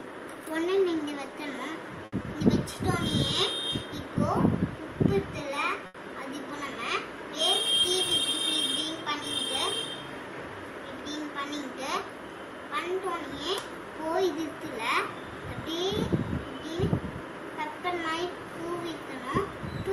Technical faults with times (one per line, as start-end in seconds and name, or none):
2.05-2.14 short stall from a late packet
2.22-2.26 short concealed packet loss
5.86-5.96 short stall from a late packet
11.16-11.63 jitter buffer speed-up